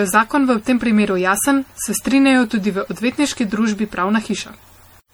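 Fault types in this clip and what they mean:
Generation loss: The speech sounds swirly, smeared and hollow throughout, with blurred onsets, more degraded than a single pass would leave. This is likely repeated lossy re-encoding, fitting MP3 at around 64 kbit/s applied about five times, each pass compounding noise and spectral holes.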